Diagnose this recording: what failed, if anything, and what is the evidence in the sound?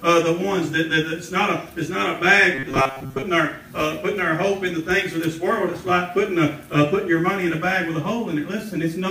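From 2.55 to 3.22 s the sound collapses into a rigid, metallic buzz at 134 Hz: robotic sound from repeated short buffers. It's likely a driver or buffer underrun, replaying a chunk of about 7.5 ms for most of that stretch instead of fresh audio.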